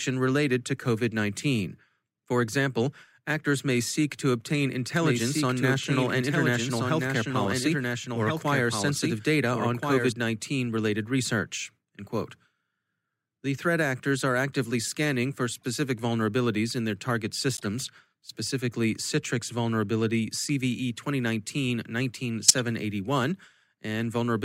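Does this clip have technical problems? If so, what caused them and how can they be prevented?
Yes. A doubled audio track runs from 4.96 to 10.12 s, starting right after "may seek to obtain": a second full-band copy trails about 1.5 s behind at roughly 5 dB quieter, likely from a slower capture path or misaligned edit, appearing on a spectrogram as the same harmonic pattern repeated, shifted and fainter, with abrupt edges. Routing only one capture path into the mix and checking edits for stray duplicate regions prevents this.

Corrupt frame decoded faults occur at 8.22–8.31, 15.57–15.65 (between "are actively scanning for" and "vulnerabilities in"), 17.57–17.65 and 22.48–22.55 s. Each is a brief chirp or noise burst lasting a few codec frames, from faint to nearly full scale at 22.5 s, and appears as a short misplaced smear of energy on a spectrogram. Checksums with packet-loss concealment instead of decoding damaged frames prevent this.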